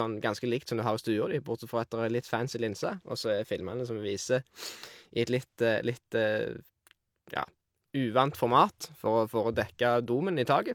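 Speech with low-bitrate audio saved at a high bitrate throughout: the first codec's artefacts remain, which fits HE-AAC at about 48 kbit/s, likely re-encoded as 256 kbit/s MP3. A spectrogram shows nothing above 20.2 kHz, and the large second encoding restores nothing the first removed.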